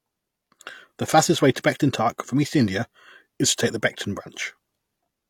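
Pre-echo appears from 1.54 to 1.56 s, just after "fastest way". The transform codec encoding this speech spreads its quantisation noise across each block, and here a sharp onset lands late in one. Noise sized for that loud attack spills into the quiet stretch before it, so a short hiss of about 20 ms runs ahead of the onset and the attack itself sounds softened and smeared rather than crisp.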